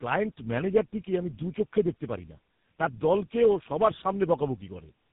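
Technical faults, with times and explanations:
throughout: tandem speech coding. The speech sounds rough, muffled and warbly, with nothing above 3.8 kHz. This points to two speech codecs in a row, fitting AMR-NB and then GSM full rate across a G.711 link, the second re-coding the first's already degraded output.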